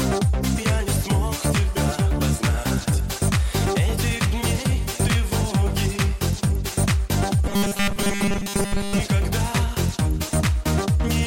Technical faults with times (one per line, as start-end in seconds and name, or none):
7.48-9.00 robotic sound from repeated short buffers